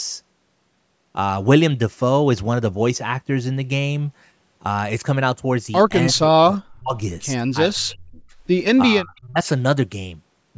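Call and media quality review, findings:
Speech suppressed in double talk, 6.13–6.95 s, 7.72–8.20 s, 9.02–9.46 s. Speech dips, up to about 40, 30 and 35 dB, roughly 0.5, 0.5 and 0.4 s affected. Likely echo canceller, unable to separate near talker from far-end echo, attenuating both.

Echo leak, 6.54–6.58 s. Faint delayed copy of the speech, about 25 dB below it, lagging 309 ms. Likely loudspeaker pickup that the echo canceller did not fully remove, returned down the line during the first suppressed stretch.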